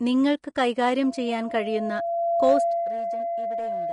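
From the start, the speech sounds hissy and grainy. Nothing is present above 10.6 kHz, and the treble is coarsely quantised into noise. This is likely Vorbis compression at a low setting, which fits a bitrate of around 30 kbps.

At 1.03 s a loudspeaker feedback squeal begins. A single tone at 681 Hz swells over roughly two seconds. The loop between microphone and loudspeaker has gained more than unity at that frequency. The tone ends up about 10 dB above the speech and runs to the end.

From 2.51 to 2.90 s there is zipper noise. The level falls by roughly 15 dB in unsmoothed steps, about 150 per second. Each step leaves a tiny click, so a fast ticking buzz rides on the sound while the level drops.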